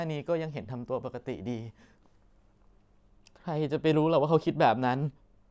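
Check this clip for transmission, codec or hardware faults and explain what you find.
Nothing in the signal points to trouble in transmission, encoding or the playback hardware; the speech arrives intact and continuous, with its level and bandwidth holding steady throughout.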